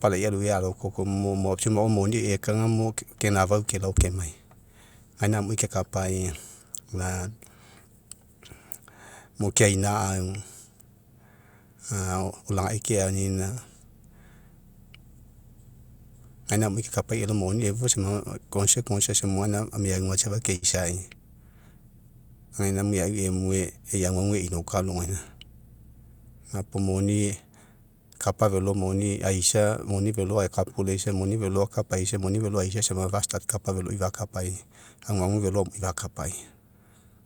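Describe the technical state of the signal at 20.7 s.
Right after "meauga safa", at 20.55 to 20.64 s, there's a short stall from a late packet. The jitter buffer ran dry, so the last sound got stretched for about 68 ms until the data showed up. Nothing's lost, but playback now runs about 68 ms later, and you hear a held, slightly buzzy sound.

Then at 20.72 to 20.75 s comes a short concealed packet loss. About 20 ms never arrived, and the receiver papered over it with about 8 ms of continued sound before blending back in. It comes across as a quick smear or wobble, with a short consonant possibly dropped.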